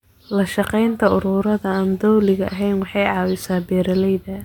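Speech recording; no technical faults found.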